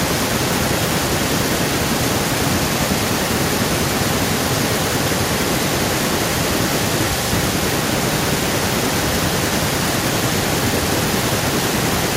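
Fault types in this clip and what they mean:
echo with no canceller: throughout the speech, each phrase is trailed by a thinner copy about 9 dB quieter, arriving roughly a third of a second later. The far end's loudspeaker is feeding its microphone, and nothing removes that returned signal before it travels back.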